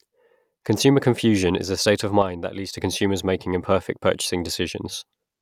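At 2.22 s the speech suddenly sags by about 6 dB and stays down until 2.78 s, a bit over half a second, then snaps straight back to full level. The sharp edges at both ends suggest a signal loss rather than a fade. It's most likely one channel drops out: for that stretch only one side of the stereo pair was carrying signal, so the mono sum lost half its contribution.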